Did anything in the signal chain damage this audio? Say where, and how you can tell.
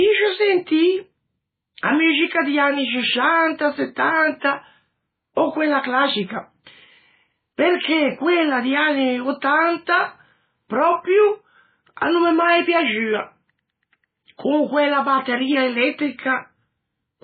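Yes, at the codec stage: throughout, the speech has nothing above 4.5 kHz and a heavy watery swirl, likely MP3 compression at a very low bitrate. Unlike a plain low-pass filter, weak components flicker frame to frame.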